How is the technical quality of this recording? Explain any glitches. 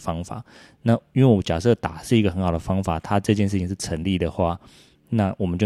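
No audible glitches or faults.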